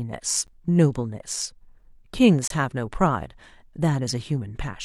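At 0.47 s and again from 2.48 to 2.50 s the speech drops into hard-edged silence, about 11 ms then 26 ms, about 2 s apart. That's a gap between stream segments: the timestamps don't quite meet, so the player pads with silence, though nothing is lost.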